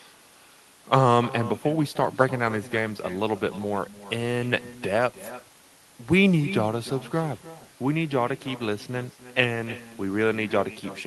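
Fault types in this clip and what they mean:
echo with no canceller: Every phrase is followed about a third of a second later by a fainter copy, roughly 16 dB below the direct speech, sounding thinner. The far end is playing the call through a loudspeaker, its microphone picks that up, and nothing removes it, so the talker's own voice returns after the network round trip, carried through the same call codec that limits the audio to about 12 kHz.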